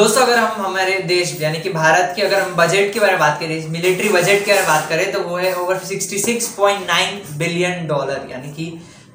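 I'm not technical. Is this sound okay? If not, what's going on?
Yes, no technical faults are audible anywhere in the clip.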